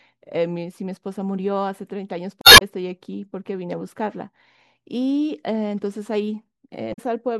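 At 2.41 to 2.62 s and again at 6.93 to 6.99 s, damaged data in the compressed stream breaks through the speech. The decoder misreads corrupted frames and loses sync until it finds the next valid frame header. Each break sounds like a brief chirp, squawk, click or short hole.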